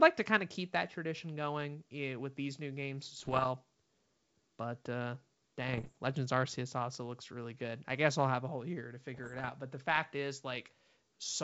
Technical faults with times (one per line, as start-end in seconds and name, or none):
3.17-3.48 bit errors on an ADPCM link
5.68-5.92 bit errors on an ADPCM link
9.14-9.50 bit errors on an ADPCM link